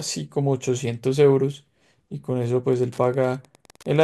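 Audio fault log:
2.65–4.04 s, Wi-Fi interference: from about 2.65 s to the end there's a steady ticking under the speech, roughly ten clicks a second, spaced 102.4 ms apart. That spacing is the giveaway, since it's a Wi-Fi beacon interval. A nearby radio is pulsing, and something in the audio chain is rectifying each burst into a small click. It sits well down, around 30 dB below the speech.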